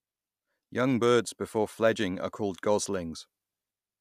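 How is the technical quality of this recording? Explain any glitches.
No glitches can be heard anywhere in this recording.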